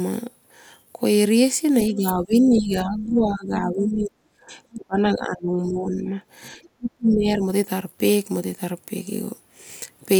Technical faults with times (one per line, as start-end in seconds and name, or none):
1.89-6.21 speech suppressed in double talk
3.80-3.85 other side's voice leaking through
6.77-7.46 speech suppressed in double talk